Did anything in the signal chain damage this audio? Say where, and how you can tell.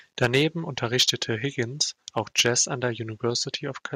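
Yes. Microphone overload at the converter: the loudest speech at 0.22–0.42 s, 0.99–1.1 s and 2.18–2.48 s (just before "an der") has a harsh, crackly edge. Input gain is likely set too high, driving peaks about 5 to 8 dB past full scale, so their tops get sheared flat.

Microphone volume stepped down in call processing: at 0.25 s and again at 3.3 s (right after "an der"), voice and background both drop suddenly, by about 3 dB and then 2 dB. That's likely the call software catching the clipping and pulling the input volume down in one step.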